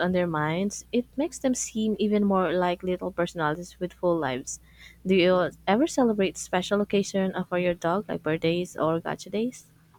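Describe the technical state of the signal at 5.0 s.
At 5.0 s the signal carries mains hum, present from the start of the clip until about 6.93 s. A ground loop or stray field from nearby power wiring is leaking the 60 Hz supply into the audio path, so a steady low tone at 60 Hz, with some low harmonics, sits beneath the speech. It lies roughly 30 dB below the speech, quiet but constant.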